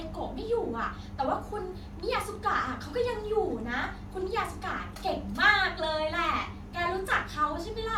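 Nothing goes wrong anywhere along the way here, so there's no fault to point to at any moment in this bit of speech.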